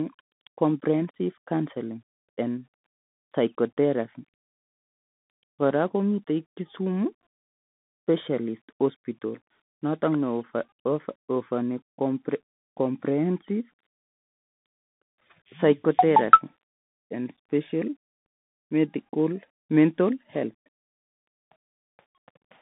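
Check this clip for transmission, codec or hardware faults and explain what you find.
There's one fault, and it runs the whole way through: the Bluetooth CVSD headset codec. The speech sits in a narrow band of roughly 150 Hz to 3.6 kHz with nothing above 3.8 kHz, which fits a 64 kbps CVSD link. Each sample is a single up-or-down bit with an adapting step size, so sharp, loud transients outrun it. The damage is plainly audible as a boxy, phone-like tone with scratchy, grainy distortion.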